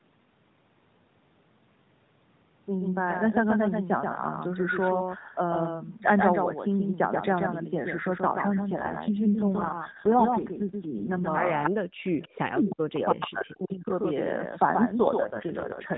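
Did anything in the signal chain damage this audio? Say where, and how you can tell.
Yes. Throughout the clip a second, full-band copy of the sound trails the first by roughly 150 ms, only a few dB quieter, with no decay or room colour. This doubled audio track most likely comes from a second capture path or a misaligned edit.

From 8.52 to 11.29 s and again from 14.90 s to the end, the sound turns rougher and more synthetic while the bandwidth stays the same and there are no gaps. This is an AMR rate drop in the codec stage, from 12.2 to 4.75 kbps.

Delayed copies of the sound appear at 11.63 to 11.70, 12.22 to 12.38, 12.70 to 12.76 and 13.09 to 13.26 s, each 314 ms behind the original. Their level ranges from far below the original to equal with it. This echo leak is likely a far-end loudspeaker echo the canceller failed to remove.

Between 11.81 and 13.91 s the main talker dips and breaks up for about two seconds in total, falling by as much as about 40 dB while the other side is active. 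This is speech suppressed in double talk, likely the echo canceller turning down its own talker along with the loudspeaker echo.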